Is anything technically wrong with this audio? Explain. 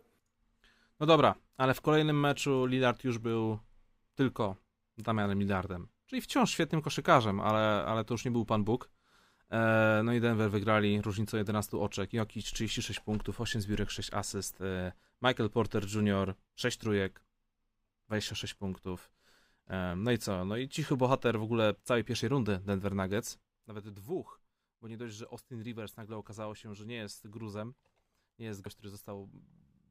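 Yes. A sudden gain jump occurs twice in this speech. From 12.42 to 12.53 s the level drops by about 7 dB, and from 23.67 s to the end it drops by about 12 dB. Speech and background noise fall together, most likely from a digital gain change applied without a ramp.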